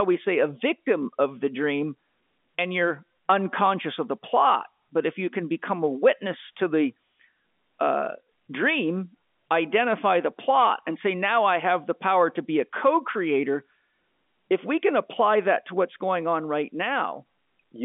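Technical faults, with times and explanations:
Nothing here counts as a technical fault; the speech simply sits in the narrow telephone band of G.711 A-law coding, with nothing above about 3.7 kHz, which is just what a phone line is meant to carry.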